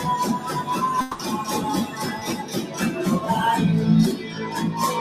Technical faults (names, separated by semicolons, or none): noise suppressor applied to music or sounds; long network dropout; short concealed packet loss; sound cut by the noise suppressor